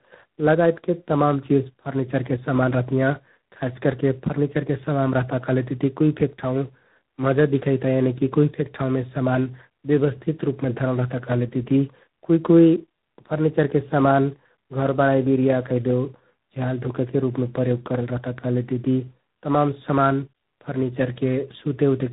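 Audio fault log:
throughout: tandem speech coding. The speech passes through two low-rate speech coders in a row, consistent with an AMR-NB stage followed by G.726 ADPCM. The second coder re-encodes the first one's errors, which makes the speech rough, muffled and warbly, with nothing above 3.8 kHz.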